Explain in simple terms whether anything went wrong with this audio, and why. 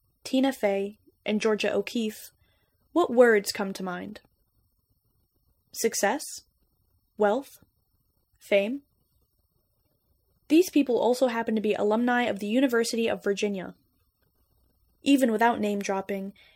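Nothing went wrong: no dropouts, glitches, distortion or other faults can be heard anywhere in the speech.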